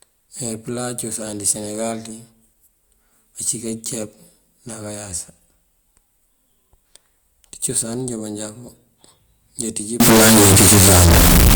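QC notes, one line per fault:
10.00–11.56 s, float read as integer: the speech abruptly turns very loud, harsh and nearly square at an almost fixed, high level, with background noise as loud as the voice, though pitch stays traceable. Likely 32-bit float samples read as 32-bit integers.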